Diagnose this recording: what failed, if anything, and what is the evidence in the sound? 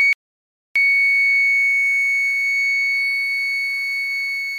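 Audio dropout to silence: the music cuts out abruptly at 0.13 s and resumes at 0.76 s, leaving about 0.63 s of silence with no room tone or noise floor. That points to a lost input stage, likely a disconnected device or failed link, while the recorder kept writing silence.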